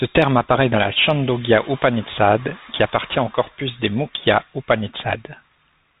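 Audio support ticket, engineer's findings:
Bluetooth CVSD headset codec, throughout. Speech band-limited to about 4 kHz, scratchy sibilants, granular hiss underneath; 1-bit delta modulation at 64 kbps, adaptive step lagging loud high content.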